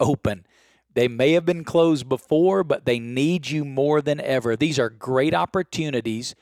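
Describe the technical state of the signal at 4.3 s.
At 4.3 s you're hearing sample clock jitter, and it's not a local event. It runs through the whole speech clip. The converter's clock wobbles by something under a microsecond, so each sample lands a touch early or late. That timing slip turns into error wherever the waveform moves fast. The result is a faint hiss or grain, roughly 50 dB below the signal, that rides on louder, brighter sounds and drops away in the gaps.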